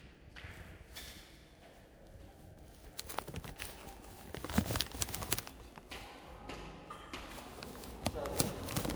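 From start to finish the sound carries generation loss. It has a swirly, smeared quality with a hollow, scooped-out tone, and sharp onsets arrive blurred rather than crisp. This is likely the result of repeated lossy re-encoding, around seven passes, with character that fits MP3 at 128 kbit/s. Each pass quantises on a shifted frame grid, so noise and spectral gaps stack up beyond what that bitrate alone would produce.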